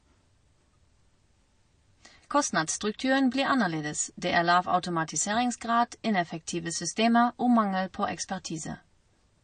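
A speech recording carries plainly audible MP3 compression artefacts from start to finish. Nothing sits above 9.4 kHz, a hard treble ceiling typical of an encoder short of bits, and the weaker frequency content flickers in and out between frames, giving a watery, swirly texture with metallic chirping on the s sounds and smeared attacks. The damage is likely from low-bitrate MP3 encoding, which fits a rate of about 34 kbps.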